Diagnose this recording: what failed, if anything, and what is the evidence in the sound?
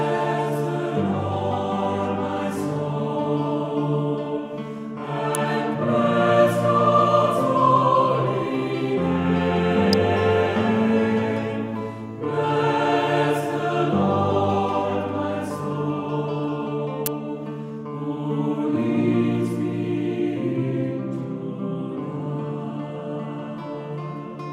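The failure is in the analogue wiring, where the signal picks up electrical switching spikes. Three sharp snaps sit on top of the sound at 5.35 s, 9.93 s and 17.06 s, each shorter than 20 ms, the first two peaking around -5 dBFS and the last reaching about 0 dBFS. The likely cause is a nearby switch, motor or static discharge arcing into the line. A digital dropout or buffer glitch would interrupt the audio, but here the underlying sound continues unbroken beneath each snap.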